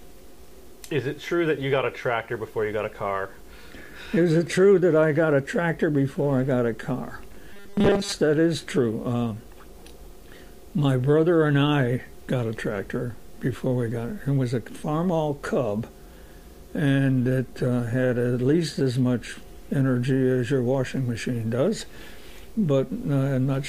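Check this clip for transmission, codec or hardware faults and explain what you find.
One fault: from 7.53 to 8.12 s, robotic sound from repeated short buffers. Audio likely arrived too seldom, so a roughly 5 ms chunk repeated through most of the span, forcing a rigid metallic 200 Hz buzz.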